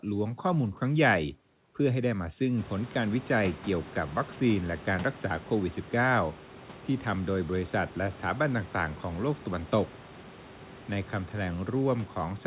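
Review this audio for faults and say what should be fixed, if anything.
Nothing needs to be fixed, as there are no faults in this audio.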